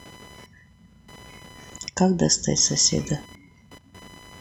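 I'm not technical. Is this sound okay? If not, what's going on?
No. The computer's own work is leaking into the recording: changes in processor or graphics load disturb the electrical ground shared with the audio circuit. This computer activity noise adds a fairly quiet, high buzz, pulsing about a thousand times a second, beneath the speech for the whole clip.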